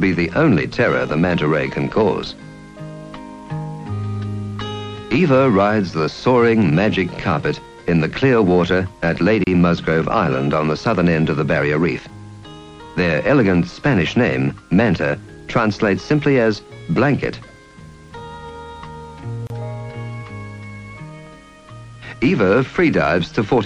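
At 9.44 s and again at 19.47 s, the sound drops out for about 30 ms. These are gaps at a join of encoded pieces, spaced 10 s apart. Each piece kept its encoder's leading delay and padded final frame. The silence has smeared edges, then the sound resumes where it stopped.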